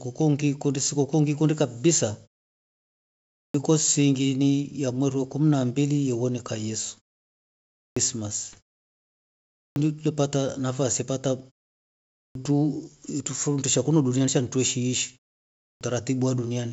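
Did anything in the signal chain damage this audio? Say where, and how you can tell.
Yes. The playback stage swallows the onset of speech after pauses. At 3.39, 7.82, 9.61, 12.21 and 15.66 s, speech resumes abruptly out of silence with its first sounds missing, each time roughly 140 to 155 ms lost, after pauses of 0.56 to 1.2 s. This is a clipped start after a pause: the output device drops into a low-power state during silence and needs that much time to wake and relock, so the beginning of the next utterance never reaches the speaker.

The transmission link shows bit errors on an ADPCM link, heard as short pops and rough, gritty bursts with brief level jumps from 4.89 to 5.00 s and from 8.48 to 8.57 s. The second burst is denser. The error rate is low, well under one percent. Each flipped bit also corrupts the decoder's step size and predictor, so the damage rings on for a few milliseconds instead of staying a single click. 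The surrounding wideband coding sounds clean, consistent with G.722 at its full 64 kbit/s.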